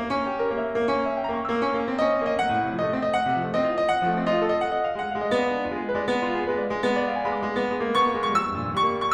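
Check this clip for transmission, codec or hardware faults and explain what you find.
Nothing in this music clip points to a technical fault. There is nothing to report.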